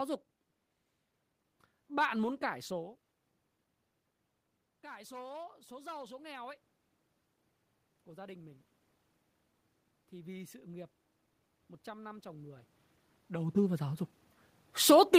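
From 4.82 to 6.62 s the automatic gain rises: the input drops by about 19 dB, and the gain control raises its gain by about 4 dB over nearly two seconds, so speech and room noise swell together. On a waveform the envelope widens steadily; on a spectrogram the noise floor brightens along with the voice. The same gradual automatic gain rise returns from 10.1 s to the end, overlapping the talker's movement around 13 s.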